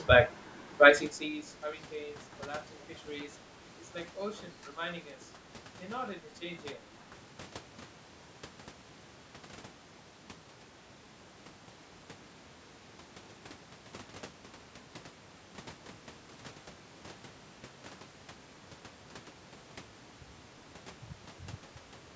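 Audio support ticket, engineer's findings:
Zipper noise, 0.86–1.48 s. A ticking, zipping texture rides on the speech while its level falls by around 20 dB. The gain moves in 1 dB steps at about 50 steps per second, with no smoothing between them, so each step leaves a small click. This points to a gain stage updating once per buffer of roughly 20 ms rather than ramping per sample.

Echo leak, 2.81–2.86 s. A brief, very faint scrap of speech repeats 312 ms after the original, far below the main speech level. The likely cause is the far end playing the call on a loudspeaker, with its echo canceller missing this fragment and sending it back down the line.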